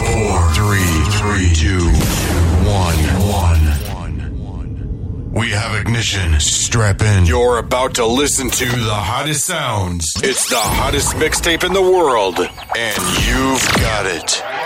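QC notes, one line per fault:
Nothing stood out on listening to this clip.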